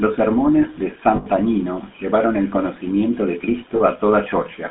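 Throughout, the speech carries the buzzy, gravelly roughness of the GSM full-rate codec, consistent with 13 kbps, and the spectrogram shows a band cut off at 3.6 kHz with little below 200 Hz. After "sermones de", lost GSM frames from 1.16 to 1.27 s (100 ms) and again after "llevaron el conocimiento de" at 3.76 to 3.81 s (40 ms) repeat the last good frame, giving a metallic ring that appears as a smeared spectrogram patch.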